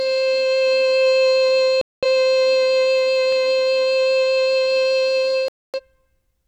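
A music clip with two digital broadcast dropouts and a short run of CD scratch ticks. From 1.81 to 2.04 s the sound mutes, losing about 213 ms, which fits five lost frames that the receiver could not decode and so silenced until clean frames resumed. A second dropout from 5.48 to 5.80 s loses 256 ms, consistent with six frames. On a waveform each appears as a flat silent gap, and on a spectrogram as a fully blank vertical band across every frequency. Between 2.82 and 3.33 s there are four brief CD scratch ticks, the longest only about a millisecond, where a disc blemish wiped out more data than error correction could rebuild on successive rotations and the player patched or muted the damaged samples. The waveform shows tiny, evenly spaced notches or spikes, and the spectrogram shows thin broadband vertical lines.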